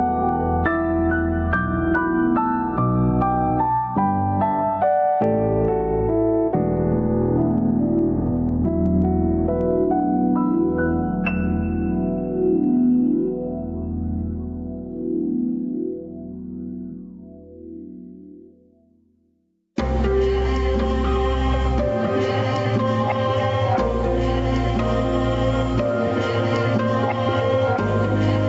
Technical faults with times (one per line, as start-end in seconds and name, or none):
0.00-28.49 gain pumping